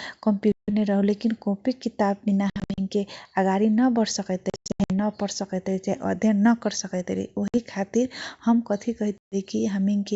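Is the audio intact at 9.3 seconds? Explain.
No. At 9.3 seconds the audio falls inside a stretch of packet loss on an ADPCM call running from 9.18 to 9.35 s, where 140 ms of the speech is missing, which fits roughly seven lost packets. The gap is filled with hard-edged silence. Because the receiver's adaptive predictor and step size drift away from the sender's during the dropout, the speech resumes slightly distorted before settling.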